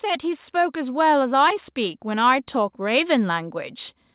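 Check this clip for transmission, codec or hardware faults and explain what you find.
There's one real fault here: an automatic gain rise running from 0.05 s to about 3.6 s. The speech and the background both swell gradually by about 7 dB, as the gain control decides the input is too quiet and keeps turning it up. The band-limited sound with nothing above 4 kHz fits a G.711 A-law call path and isn't a fault in itself.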